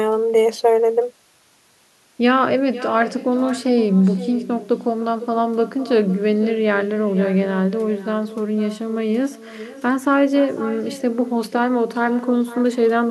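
From start to finish, the speech carries echo with no canceller. A far-end loudspeaker feeds its microphone, and nothing strips that out. Each phrase returns about half a second later. The copy sits about 15 dB down, and thinner.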